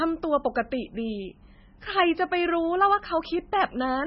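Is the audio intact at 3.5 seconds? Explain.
No. At 3.5 s, as throughout, the speech sounds watery and dull above 5.6 kHz, likely MP3 compression at about 16 kbps, cutting treble and dropping weak frequency lines.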